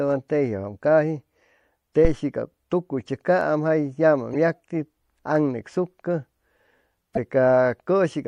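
The whole recording carries plainly audible MP3 compression damage. Weak detail flickers in and out between frames. The result sounds watery and swirly, with smeared attacks. The likely cause is an MP3 encode at a low bitrate, which fits about 64 kbps.

At 2.05 s a phantom power thump lands, lasting until 2.17 s, just before "cap tucuy". A supply switched on or off on a live input, and the voltage step passed through the coupling capacitors. It is a deep thump that dies away in about 27 ms.

Corrupt frame decoded faults follow at 4.32 s and 7.15 s. Each is a damaged compressed frame the decoder played anyway. Misread data put energy at the wrong frequencies across a couple of frames. Each is a short chirp or noise burst, peaking near -15 dBFS and then near -10 dBFS.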